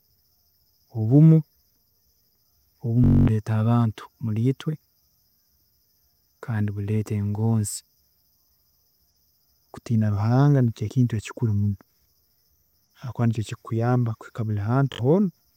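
At 3.04 s there's a Bluetooth stutter lasting until about 3.28 s. Packets went missing or arrived late, so the receiver kept replaying its last short buffer, giving a quick machine-gun buzz. When the speech comes back, roughly 0.23 s has been skipped, which fits around eleven lost packets. A shorter stutter hits at 14.93 s through 14.99 s, dropping about 64 ms, consistent with about three packets.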